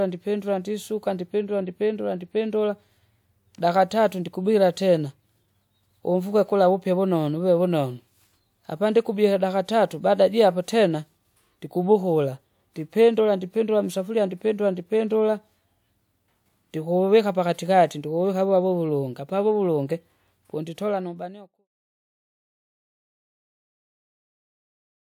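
No faults can be heard anywhere in this speech recording.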